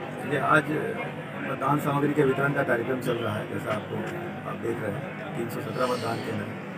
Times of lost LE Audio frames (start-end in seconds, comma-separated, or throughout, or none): none